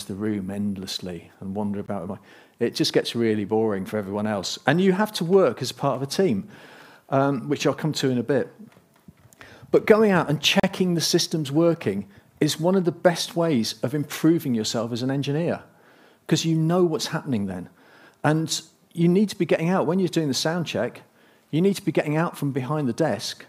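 At 1.86 s and 10.60–10.63 s, the audio drops briefly to silence (19 ms, then 37 ms) and resumes: a likely Bluetooth stall, showing as flat gaps in the waveform and blank vertical strips on a spectrogram.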